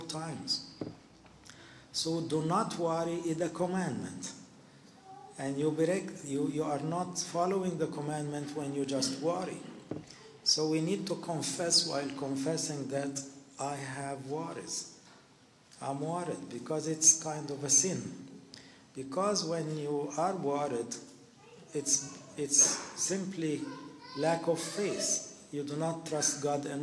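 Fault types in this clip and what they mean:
No technical faults found in the audio.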